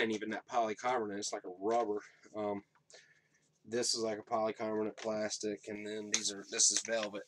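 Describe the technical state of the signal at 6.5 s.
At 6.5 s you're in the middle of a stretch of pre-emphasis left on, running from 5.75 s to the end at 7.27 s. The treble lift applied before transmission never got its matching de-emphasis, and the shape fits a J.17 curve, leaving 10 kHz about 11 dB hot relative to 1 kHz. So the sound turns thin and glassy, with sibilance and upper detail pushed forward and the body underneath sounding lean.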